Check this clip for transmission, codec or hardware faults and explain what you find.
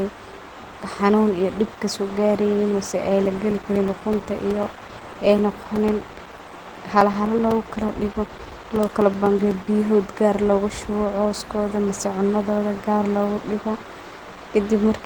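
Two faults are audible: low-bitrate codec coloration across the whole recording, and a run of regular dropouts in the middle.

Throughout the speech there is a hoarse, muffled, grainy quality, most likely Opus compression in its hybrid mode. Hybrid mode codes the lower band with the speech coder and fills the upper bands coarsely, and the damage is plainly audible, which fits a low rate of about 16 kbps. Although the bandwidth stays fullband, with nothing above about 20.2 kHz, a spectrogram would show smeared, noisy texture in the high bands rather than clean harmonic detail.

Periodic USB or driver dropouts begin just after "mise ay", at 3.26 s, and continue until 9.52 s. Every 0.125 s, roughly 4 ms of audio is replaced by silence, about fifty gaps in all, as if the driver or bus were stalling on a fixed schedule. They are heard as an even ticking under the speech. A waveform shows narrow flat gaps at regular spacing, and a spectrogram shows thin vertical broadband lines at each cut.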